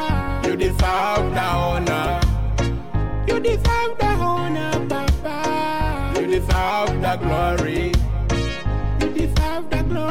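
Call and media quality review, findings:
Nothing to flag here; I listened through the whole clip and found no problems worth a ticket.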